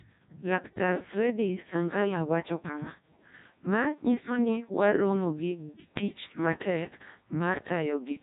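From start to end the speech carries heavy Codec 2 vocoder damage: only pitch, voicing, energy and a spectral envelope survive, resynthesised from sine waves at what sounds like its 1.2 kbit/s mode. Voices turn robotic and buzzy; spectrograms show smeared, overly regular harmonics and nothing above 3.8 kHz.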